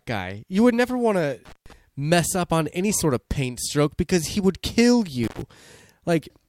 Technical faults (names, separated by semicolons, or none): intermittent contact